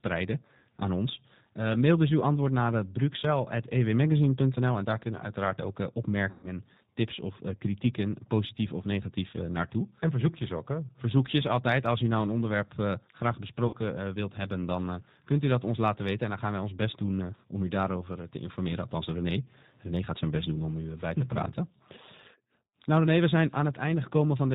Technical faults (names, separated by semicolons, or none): G.729 codec; VoIP packet loss concealed by the speech codec